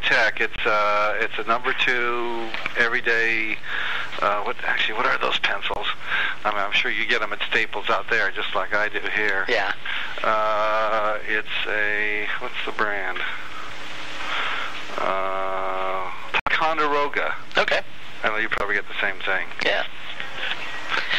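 Corrupt frames get muted at 0.56, 5.74, 16.40 and 18.58 s. The decoder rejects damaged frames and leaves abrupt 40 to 90 ms silent holes, with timing intact.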